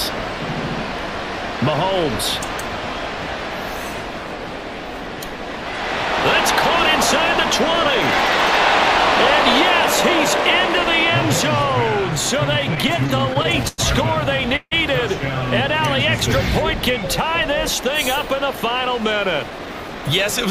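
From 12.53 to 13.80 s there's a run of repeated stalls, a stutter: fourteen little hitches where the sound hangs on itself and then carries on. Packets were turning up late or slower than playback, so the jitter buffer kept running dry, and each time the receiver stretched the last bit of sound to cover the wait. That adds about 226 ms of filler, with the longest hold near 101 ms and roughly 18% of that stretch concealed. Nothing's actually lost, but the audio drags and stumbles.

At 14.56 s comes a short call audio freeze lasting about 0.17 s. The last sound gets held as a fading buzzy continuation, dropping to near silence for its final 60 ms or so, then the audio resumes right where it stopped. The likely cause is packets held up in transit that left the jitter buffer empty for a moment. About 153 ms of gap gets inserted, pushing everything after it later, with nothing missing.

From 19.12 to 20.02 s there's a jitter buffer speed-up. 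The buffer had built up more audio than it wanted, the kind of backlog you get when delayed packets land in a bunch. The receiver trimmed it by cutting tiny pitch-period-sized slices over and over, about a tenth of a second in total. Playback runs at around 110% speed with the pitch unchanged, so that last second sounds a bit rushed.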